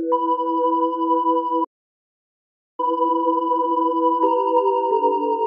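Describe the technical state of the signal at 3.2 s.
At 3.2 s the audio sits inside a time-compressed catch-up running from 2.80 to 3.94 s. To clear a backlog after a stall, the player drops short segments and cross-fades the remainder, playing at 2.0x speed. The sound is hurried but keeps its normal pitch.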